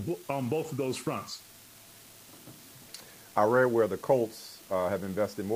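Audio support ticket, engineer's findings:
Unreliable data bit, present for the whole clip. Steady crackle and fine fizz under the sound. Continues unchanged through pauses, so not program-dependent. Probable component: a marginal data line. Mechanism: one bit flips at random in a share of samples. Each flip adds an identical spike, step about -42 dBFS. Random timing gives the fizz. Fixed size keeps the level even.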